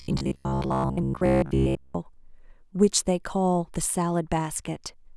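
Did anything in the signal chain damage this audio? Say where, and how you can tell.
Yes. From 0.02 to 1.95 s the speech turns into a rigid, metallic buzz near 67 Hz, loosely tracking the syllables: robotic sound from repeated short buffers. At the driver or buffer stage, audio likely arrived too late, so roughly 15 ms chunks were looped over most of the real signal.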